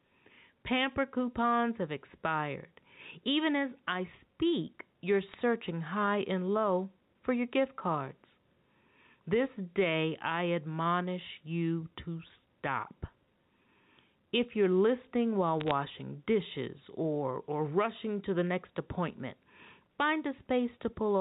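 Gain pumping runs through the whole clip: the level swells and ducks by about 5 dB as loud and quieter passages alternate. The likely cause is input gain set too high, with a fast limiter or compressor clamping down on each loud sound and then releasing.

Bit errors on a digital phone line strike from 5.29 to 5.34 s, right after "as I speak you're", and again from 15.60 to 15.71 s, between "you're listening while" and "dishes or or rushing". Flipped bits on the line corrupt individual samples, which is heard as brief bursts of crackle over the speech. The error rate points to a few bits in every thousand. The G.711 telephone band underneath still cuts off at 4 kHz.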